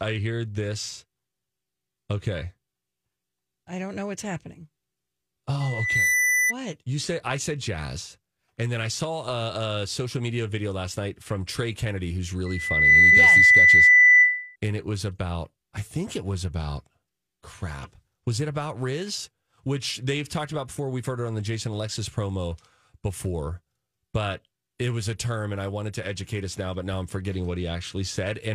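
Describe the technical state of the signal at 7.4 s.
At 7.4 s the speech signal is intact, with no audible fault at that point.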